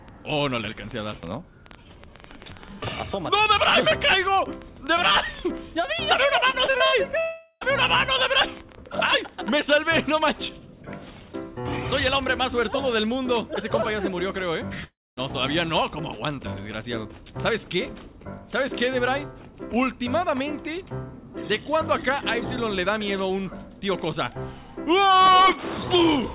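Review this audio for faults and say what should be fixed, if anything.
Train of clicks, 0.09 s to 10.16 s: an irregular ticking of about 6.6 clicks per second, around seventy in all, peaking at about 5 dB above the programme and audible in the quieter passages too. The clicks have the same shape from one to the next, which points to a likely cause of interference from nearby equipment or a faulty connection or power supply injecting pulses. Prevention: reroute or shield cabling, move away from noisy equipment, and check the interface's buffer settings and drivers.

Repeated packet loss (robotic sound), 6.5 s to 6.96 s: five holes close together, the longest 67 ms, each patched by extending the previous sound. About 185 ms of the span, roughly 41%, is concealment, so the passage sounds choppy with pieces missing. The concealment is band-limited like the rest of the audio, with nothing above 4 kHz, which fits a G.711 A-law call path at 64 kbps. 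Prevention: stabilise the network link and give the jitter buffer more headroom.

Long network dropout, 7.2 s to 7.64 s and 14.84 s to 15.2 s: in the first, about 0.42 s of audio never arrives. The receiver stretches the last sound into a fading buzz, leaving about 50 ms of near-silence before the audio resumes past the missing part. In the second, about 0.33 s is lost, and the concealment dies away into roughly 240 ms of silence. The likely cause is the network stalling long enough that nothing reached the receiver. Prevention: use a wired or more reliable connection and monitor for sustained loss bursts.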